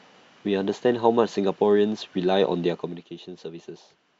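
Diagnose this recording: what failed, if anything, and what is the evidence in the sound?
Zipper noise from 2.64 to 3.15 s, as the level falls about 10 dB. Around 200 small ticks a second. Gain steps once per buffer or in coarse increments, unsmoothed, in the processing stage.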